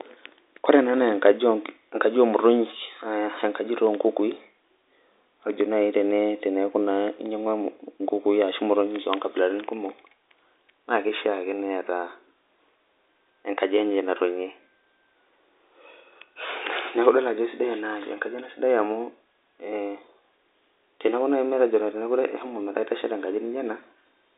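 No technical faults can be heard in this speech clip. It comes through G.711 telephone coding, so the sound is held to a line band of roughly 250 Hz to 3.7 kHz, with nothing above 3.8 kHz, which fits A-law coding at 64 kbps.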